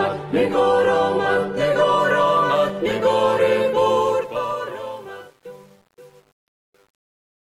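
For the first 2.0 s the audio comes from an adaptive stream starting at a low bitrate. It sounds dull and smeary, with nothing above 14.7 kHz. That fits roughly 24 kbit/s HE-AAC before a step up to around 96 kbit/s AAC-LC. On a spectrogram the high band is empty or blotchy until 2.0 s, then fills in abruptly with no gap in the waveform. From 3.91 s to 7.42 s, as the sound fades out, there is truncation distortion on the fade. The fade appears to be computed without dither at a depth that fits an 8-bit stage, so as the level drops the waveform collapses into a few square steps. Between 4.65 s and 7.42 s it turns gritty. A spectrogram shows broadband harmonic hash riding the fading tail instead of a clean decay.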